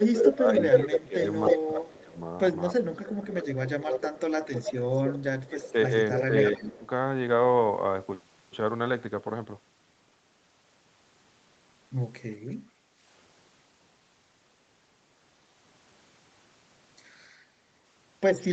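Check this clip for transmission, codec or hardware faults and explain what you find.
Two kinds of echo-canceller fault affect the first seven seconds of this speech clip, plus one brief dip later on.

Speech suppressed in double talk occurs from 0.03 to 2.16 s, 2.71 to 3.63 s and 5.15 to 6.85 s, with drops of about 15, 15 and 25 dB. The likely cause is the canceller ducking both talkers during overlap. On a waveform this appears as a chopped, shrinking envelope.

An echo leak is heard from 0.2 to 2.01 s (304 ms delay, about 5 dB above the speech), from 2.97 to 5.19 s (311 ms, about 10 dB below) and from 6.14 to 6.64 s (316 ms, about 5 dB below). The likely cause is residual loudspeaker pickup. On a spectrogram it shows as a duplicate pattern offset by roughly 0.3 s.

Background gated by the echo canceller occurs at 12.75 to 12.98 s, where the room sound dips about 7 dB for roughly 0.2 s. 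It looks like a brief notch in the noise floor.

The spectrum stops at 8 kHz, consistent with the call path's normal band limit.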